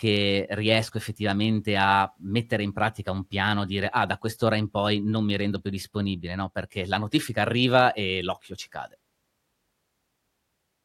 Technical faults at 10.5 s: clock slip clicks

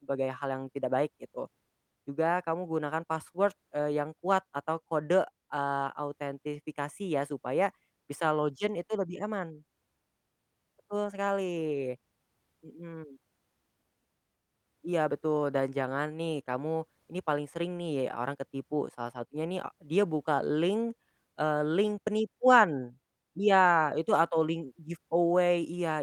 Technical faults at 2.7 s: none

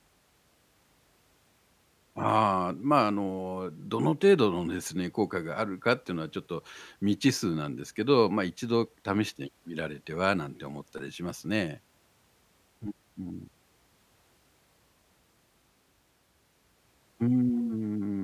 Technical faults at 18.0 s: none

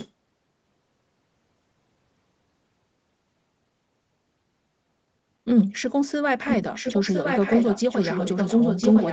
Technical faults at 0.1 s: echo leak

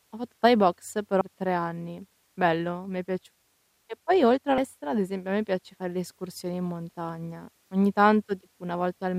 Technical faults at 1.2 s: compressed frames skipped

